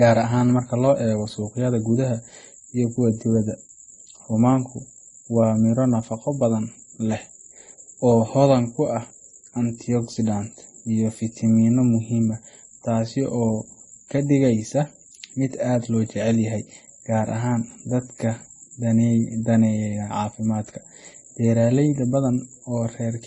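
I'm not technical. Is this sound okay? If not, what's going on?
No, the speech sounds a bit dull and smeared from start to finish, with nothing above about 11.3 kHz. That's likely transcoding between lossy codecs: it was squeezed by one codec, then squeezed again as an MP3, so both rounds of damage pile up.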